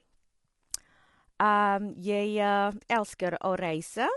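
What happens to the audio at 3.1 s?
Low-delay AAC compression runs through 3.1 s and the whole clip, likely from a codec such as AAC-ELD at a bitrate around 32 kbps. Its short frames resolve pitch harmonics poorly, so the speech sounds rough and grainy, with noise between harmonics and nothing above 11.6 kHz.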